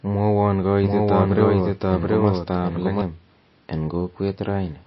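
From start to finish the speech has nothing above 5.8 kHz, and it sounds watery and swirly with smeared consonant attacks. This is plainly audible damage, likely from MP3 compression at a low bitrate around 24 kbps, where the encoder cuts the treble and drops weak frequency detail that flickers frame to frame.

From 0.84 s to 3.02 s a second full-band copy of the speech runs roughly 0.7 s behind, at about the same level, with no decay or room colour, and it starts and stops abruptly. This doubled audio track likely comes from the same signal being mixed in twice via a slower path.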